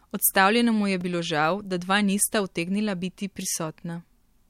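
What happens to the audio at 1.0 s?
At 1.01 s, just before "bilo žal da dva", the speech drops into a block of digital silence about 2.9 ms long, which fits a 128-sample buffer the program failed to fill in time. Because the signal snaps to zero and back without any fade, the hole itself is too brief to hear and comes across as a tick or dip. A true gap of digital silence is what separates it from a lone click or a softened dropout.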